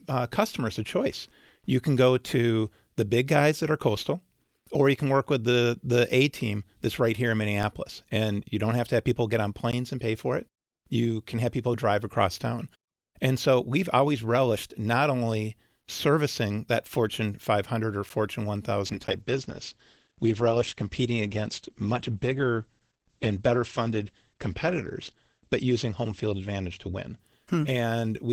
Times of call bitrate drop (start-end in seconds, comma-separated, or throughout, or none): 18.87-28.33